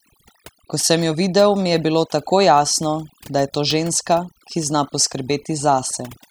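From start to finish the speech carries overdone noise removal. A noise reduction stage was set far too aggressively: any frequency band sitting near its noise estimate is pulled down hard or switched off, and the quieter components of the voice are removed along with the noise. Between phrases the background drops to near silence scattered with twinkling, chirping specks.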